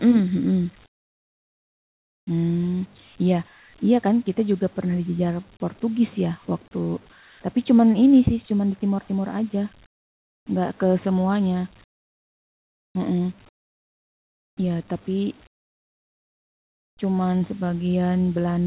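Comfort noise replaces the background at 0.86–2.27, 9.86–10.46, 11.84–12.95, 13.49–14.57 and 15.47–16.97 s. In each pause the real background gives way to a steady, featureless hiss. It is about 19 to 24 dB quieter. Discontinuous transmission likely halted sending between phrases.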